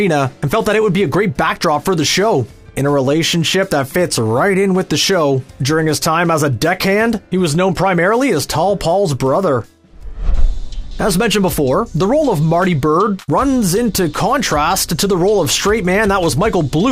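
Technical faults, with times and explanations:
Nothing here to flag; the audio runs along without a single technical hiccup turning up anywhere.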